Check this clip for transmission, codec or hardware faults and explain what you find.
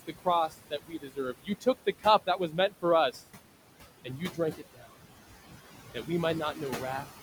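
Two faults are audible, both from a noise suppressor. The room noise itself sits about 13 dB below the speech and belongs to the recording.

Noise suppressor artifacts run through the whole clip. The suppressor judges which frequency bands hold steady noise and pulls them down, frame by frame, by about 16 dB. It cannot remove noise that shares bands with the voice. So the background drops away in the gaps between words. Then it comes back up underneath each stretch of speech. The result is an audible pumping of the noise floor.

Speech cut by the noise suppressor occurs in three places. The first runs from 0.07 to 3.21 s, with drops of up to about 18 dB. Around a second of audio is affected in total. The second runs from 4.05 to 4.96 s, reaching about 16 dB, over a bit under half a second. The third runs from 6.54 to 7.05 s, reaching about 10 dB, over roughly a tenth of a second. In each case the suppressor mistook quiet parts of the speech for noise. 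It turned them down with the background. Those parts sound swallowed and faint.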